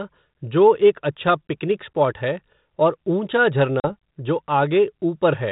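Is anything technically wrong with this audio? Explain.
Yes, there's one. At about 3.8 s there's packet loss on the ADPCM call: roughly 40 ms of audio, likely a couple of packets, drops out and is filled with silence, ending around 3.94 s, so you get a hard-edged hole. ADPCM sends only differences from an adaptive prediction, so once the decoder misses those packets, its predictor and step size no longer match the sender's. The sound comes back with some grit, then settles over a few tens of milliseconds as the decoder catches up. The G.726 coding at 32 kbit/s is working normally here.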